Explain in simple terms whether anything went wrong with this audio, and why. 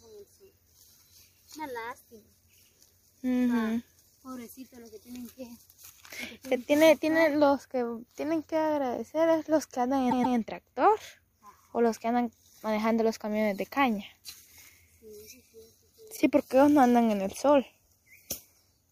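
Two spots stutter, and both are repeated frames: a chunk of the compressed audio got played again. From 10.10 to 10.36 s, a 130.6 ms slice plays twice more, a quick triple stammer adding about a quarter second. Then at 16.16 to 16.19 s a tiny 26.1 ms piece repeats once, heard as a small hiccup.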